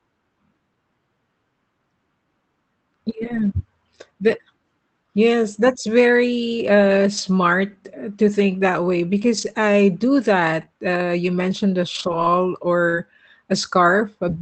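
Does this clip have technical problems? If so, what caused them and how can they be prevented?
Yes. Lost packet rebuilt from error correction, at 3.09–3.39 s, 7.17–7.19 s (after "that's very uh"), 9.37–9.55 s (between "to think that way" and "I do"), 10.61 s (after "I do"), 11.95–12.25 s and 12.93–12.95 s: packets went missing, and the decoder played the low-bitrate backup copies carried in the following packets. Each spot stays continuous but sounds rougher and noisier. Prevent it by improving the network path or raising bitrate and redundancy so fewer packets need rebuilding.

Short concealed packet loss, at 10.65–10.69 s and 12.89–12.95 s: audio arrived too late for the decoder, so the receiver extended the preceding sound to cover about 20 ms and about 40 ms, then blended back into the real signal. Listeners hear this as a brief smear or wobble. Prevent it with a larger jitter buffer or a steadier connection, so packets arrive before their playout time.

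Throughout, the Opus call path limits the audio to below 8 kHz and adds its usual coding noise, which fits a bitrate around 24 kbps.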